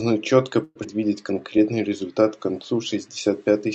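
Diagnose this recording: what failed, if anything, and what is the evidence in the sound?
From 0.63 to 0.78 s the speech stops moving forward. The last sound is stretched into a fading buzz or hiss for about 120 ms, then there is roughly 20 ms of silence before the speech resumes exactly where it left off, with nothing lost. This is a call audio freeze at the network and jitter-buffer stage, likely caused by packets arriving late and the buffer running dry. The receiver filled the gap by extending the last sound, which pushed everything after it about 121 ms later.

At 0.83 to 0.87 s the speech jumps forward. Only a few milliseconds of fill join the two sides, and about 70 ms of speech is simply gone. This is a skip ahead, at the network or jitter-buffer stage. Later audio was already queued when a stretch was dropped, either on the way or by the buffer overflowing. The result is a near-direct splice that cuts away about 70 ms of speech.

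From 1.34 to 1.98 s the speech drags. It plays at about 89% speed while the pitch stays the same, and sounds are drawn out. This is a jitter buffer slow-down. The receiver was building up a reserve by repeating single pitch periods many times over, which added about 79 ms to that stretch. The audio runs through the Opus call path, and the highs stop around 8 kHz.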